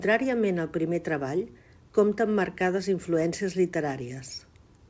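The sender's clock runs roughly 2 percent slower than the receiver's, so this clock drift between sender and receiver leaves the jitter buffer steadily short of audio throughout the speech. The receiver has to stretch what arrives, and the pacing never quite settles.

From 0.76 s to 4.79 s, repeated timing corrections fill that gap by repeating short slices, adding roughly a tenth of a second in total and running the speech at about 98 percent speed. The unevenly spaced repeats come through as faint hiccups and a slightly dragging, unsteady tempo over the G.722 call sound, which has nothing above 8 kHz.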